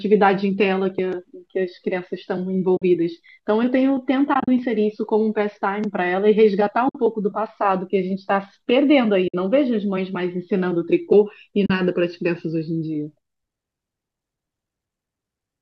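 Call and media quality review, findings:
AAC frame loss with muting: soft-edged dropouts at 2.77–2.82 s, 4.34–4.48 s (broken holes, longest about 40 ms), 6.89–6.95 s, 9.28–9.34 s, 11.66–11.70 s, 40–90 ms lost each, which fits 10 ms frames. The decoder zeroes the spectrum and the overlap windows taper the edges. On a spectrogram these are full-band vertical gaps with faded borders. On the waveform the envelope falls to silence. They sit over light low-delay AAC coding, likely AAC-ELD.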